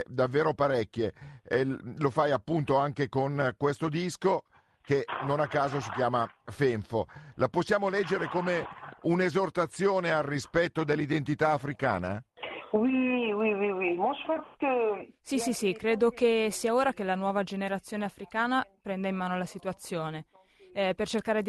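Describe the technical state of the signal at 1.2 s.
At 1.2 s the signal is intact, with no dropout, glitch or distortion, only the ordinary character of the call path, whose Opus coding limits the top end to about 12 kHz.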